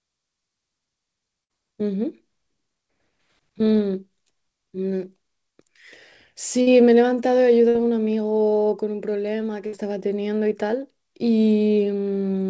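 At 1.44, 6.61, 7.69 and 9.67 s, a burst of packet loss replaces about 55 ms with concealment. The last sound is stretched into a fading buzz or hiss, and the speech resumes with about 60 ms skipped. A spectrogram shows smeared, repeating bands, and the waveform shows a decaying patch.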